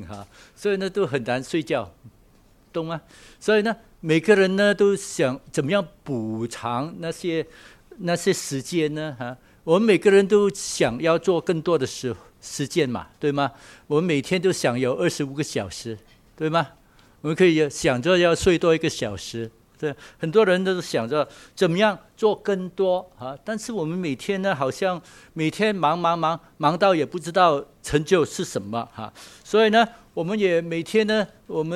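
No technical faults can be heard anywhere in the recording. The sound runs without interruption or audible damage.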